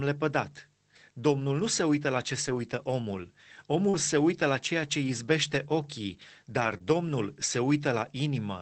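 Just after "se uită la ce", from 2.47 to 2.57 s, there's a lost packet rebuilt from error correction. The packets went missing, but the decoder played the low-bitrate copies carried in the next ones, so nothing drops out. That stretch just turns rougher and grainier. The same thing happens again at 3.93 to 3.99 s, right before "se uită la ceea", at 5.03 to 5.09 s after "uită la ceea ce", and over a longer 6.57 to 6.75 s patch.

Overlapping that second spot, 3.89 to 3.95 s has a short concealed packet loss. About 40 ms never arrived, so the receiver stretched the preceding sound to fill the hole and then blended back in, which comes across as a quick smear. Another one at 6.77 to 6.82 s covers about 20 ms with a brief wobble.

All of this runs over an Opus call path that tops out around 8 kHz, with coding noise that fits roughly 24 kbps.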